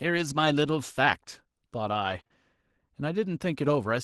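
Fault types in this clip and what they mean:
Lost packet rebuilt from error correction: at 0.45 s and again from 2.03 to 2.21 s, lost audio was replaced by low-bitrate copies carried in the following packets. There are no gaps, but those stretches sound rougher and noisier. The longer one covers 100 ms, which fits five separate lost packets.
Short concealed packet loss: from 2.23 to 2.27 s and 2.27 to 2.32 s, two back-to-back 20 ms holes that never arrived in time. The decoder filled them by extending the preceding sound and then blending back into the real audio, which is heard as a brief smear.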